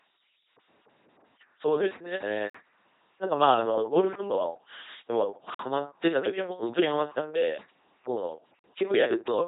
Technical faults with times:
0.00-9.47 LPC-10 vocoder
2.50-2.54 gap between chunks
5.54-5.59 gap between chunks
8.59-8.64 gap between chunks

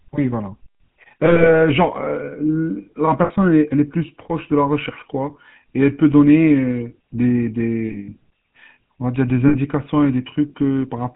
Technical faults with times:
0.00-11.16 GSM full-rate codec
1.26-1.51 lost GSM frames
3.24-3.31 lost GSM frames
7.88-8.14 lost GSM frames
9.48-9.56 lost GSM frames

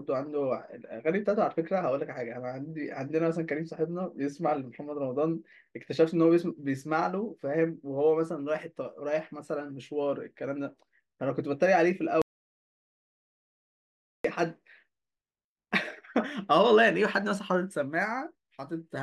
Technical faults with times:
12.22-14.24 audio dropout to silence

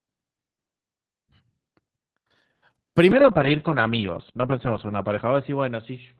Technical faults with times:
3.14-6.20 call bitrate drop

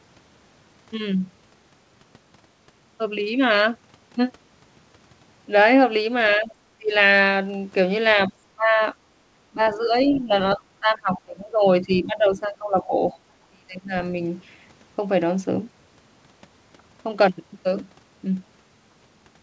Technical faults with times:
6.37-6.92 speech suppressed in double talk
8.28-8.80 speech suppressed in double talk
9.50-13.15 speech suppressed in double talk
11.14-11.21 other side's voice leaking through
13.13-13.18 other side's voice leaking through
13.48-13.94 speech suppressed in double talk

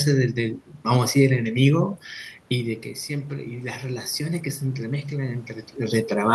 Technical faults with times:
2.51-6.06 automatic gain rising

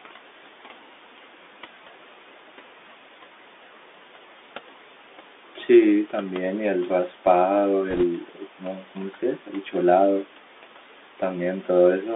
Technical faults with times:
0.00-12.15 noise suppressor artifacts
0.00-12.15 Bluetooth CVSD headset codec
7.90-8.04 bit errors on a Bluetooth voice link
8.21-9.75 speech cut by the noise suppressor

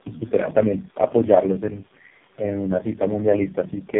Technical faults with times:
0.00-4.00 tandem speech coding

